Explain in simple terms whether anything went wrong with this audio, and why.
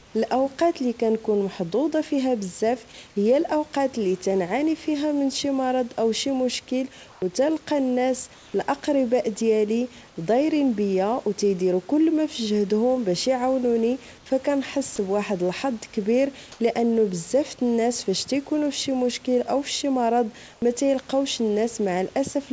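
The call's sender likely switched off transmission during brief pauses, and the receiver filled each gap with comfort noise in place of the background. At 0.0, 7.12, 8.34, 10.08, 14.18, 16.52 and 20.54 s, the room sound becomes a flat, featureless hiss for 80 to 200 ms, sometimes slightly louder or quieter, until the speech resumes.

At 14.96 s there is sound dropped by the voice detector. The detector likely mistook a quiet bit of speech for background and stopped sending, so a very short slice of the audio is swapped for that same steady noise before transmission resumes.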